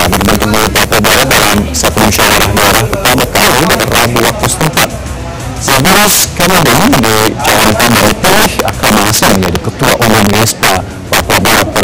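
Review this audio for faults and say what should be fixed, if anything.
Integer overflow throughout: a gain stage pushed peaks about 7 dB past the integer limit, so roughly seven percent of samples wrap to the opposite sign, producing violent cracks on loud passages. Use saturating arithmetic or limit gain before conversion.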